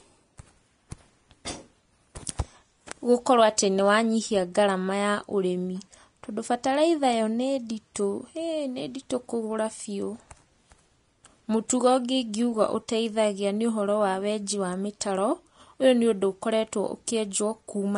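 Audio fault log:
throughout, Vorbis compression: likely a low-bitrate Vorbis encode, fitting roughly 34 kbps, removing everything above 10.6 kHz and coarsely quantising treble, so the speech sounds hissy, grainy and dull.
7.95 s, pre-echo: quantisation noise within a transform block spread 11 ms ahead of a sharp attack, leaving a brief hiss just before it and a softened, smeared onset.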